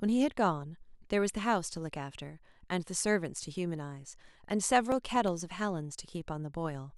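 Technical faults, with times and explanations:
4.80–5.40 s, CD scratch ticks: six short ticks land in the speech over about 0.6 s, the longest lasting only a couple of milliseconds. A scratch or blemish on the disc surface has wiped out more data than the player's error correction can restore, and the damaged spot comes round on each rotation. The player conceals each gap by interpolating across it or briefly muting, which leaves a brief click or micro-dropout at every pass.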